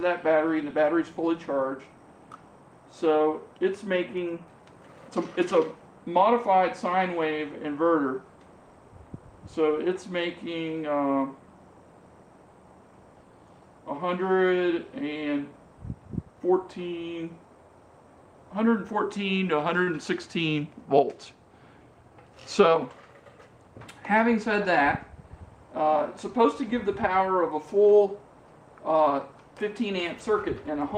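A packet arrived late and the jitter buffer ran dry, producing a short stall at 19.83 to 19.88 s: about 33 ms of sound is held too long, then resumes intact.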